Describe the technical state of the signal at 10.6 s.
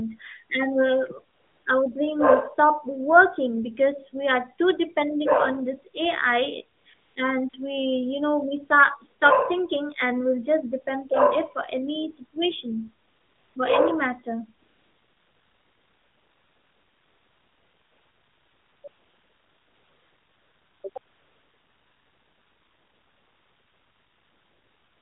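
At 10.6 s the speech is intact, with nothing there beyond the narrow telephone-band character of the AMR narrowband mobile codec path the whole clip passes through.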